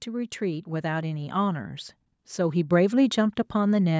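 Automatic gain rising runs from 0.05 to 1.79 s in this speech recording. The gain control judged the input too quiet and pushed its level up by about 4 dB, so voice and background swell together over that stretch, within the band-limited call microphone path.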